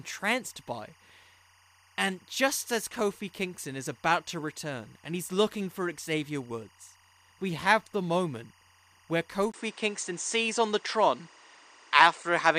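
Timecode bleed runs through the whole recording: linear timecode has leaked in from a nearby track or cable. Its square wave flips between tones near 1 and 2 kHz, at a rhythm that fits 24-frame code, and sits roughly 30 dB down as a faint, steady chirping warble.

Input switched to a poorer device at 9.52 s, just after "have the moment where", likely from a mid-recording change of microphone or headset profile. A 20 ms gap precedes duller sound with nothing above 9.2 kHz, a level shift of around 5 dB, and fresh background noise roughly 35 dB below, lasting to the end.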